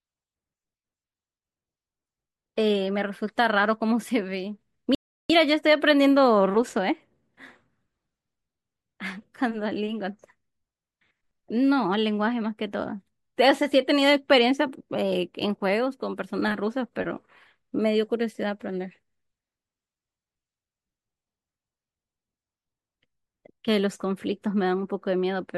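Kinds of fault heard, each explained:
Rebuffering stall: at 4.95 s the speech drops abruptly to silence for about 0.35 s, then picks up exactly where it broke off, with nothing skipped. The playback ran short of downloaded audio and paused until more arrived, adding that gap of time.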